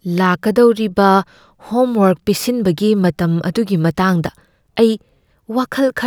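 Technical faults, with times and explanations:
No technical faults detected in the speech recording.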